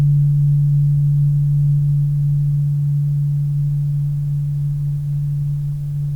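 Listening through this music, nothing stood out as a technical fault at any point.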